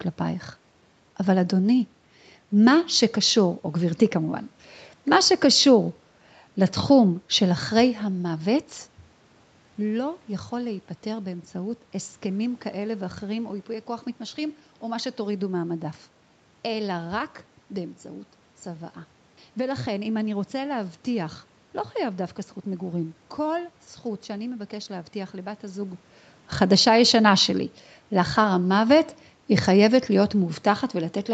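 A speech clip with nothing technically wrong with it.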